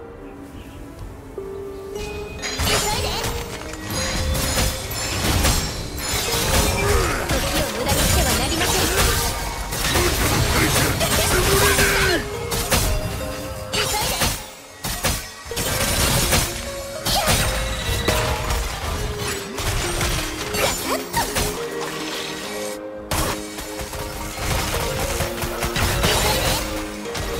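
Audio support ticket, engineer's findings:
Sample clock jitter from 12.0 s: hiss tracking loud, bright sound, absent in silence. Unstable converter clock, roughly 2 µs timing error, noise about 25 dB down.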